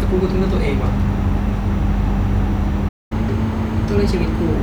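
At 2.88 s the player most likely ran short of buffered data, causing a playback stall: the speech cuts out in mid-flow and the output stays silent for about 0.22 s, resuming at 3.12 s where it had stopped.

From 3.12 s to 4.56 s the player works through its backlog by resampling, a catch-up at higher speed. The speech runs at 1.1 times normal rate and its pitch rises by roughly a semitone and a half, sounding hurried and slightly raised until it settles.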